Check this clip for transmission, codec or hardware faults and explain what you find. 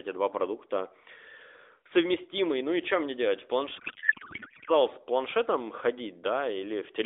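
There's one real fault, a codec payload misread, running from about 3.78 to 4.71 s and clearing just before "с планшетом". The sound there turns into garbled noise and warble that barely tracks the speech. It fits a packing mismatch, octet-aligned AMR being read as bandwidth-efficient, so the decoder pulls fields from the wrong bit positions. The narrowband AMR path itself stays within about 300 Hz to 3.6 kHz with light codec damage, which fits the 12.2 kbps mode.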